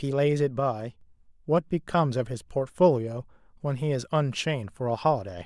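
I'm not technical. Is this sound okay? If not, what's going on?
No. There's a sudden gain jump from 0.60 to 1.01 seconds: the speech and the background noise both drop in loudness together, instantly, then snap back up. Most likely a volume setting was switched abruptly instead of being faded smoothly.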